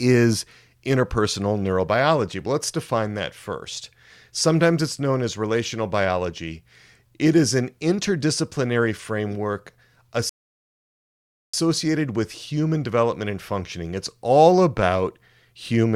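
At 10.29 s, right after "is an interdisciplinary framework", a rebuffering stall cuts the speech to silence until 11.54 s. The player ran dry of downloaded audio, adding 1.24 s, then resumed exactly where it stopped. Waveform and spectrogram show a flat, empty gap.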